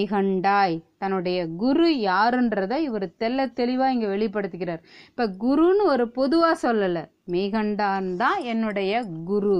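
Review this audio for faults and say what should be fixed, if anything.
Nothing here needs fixing; I listened to the whole speech clip and didn't hear a single fault worth flagging.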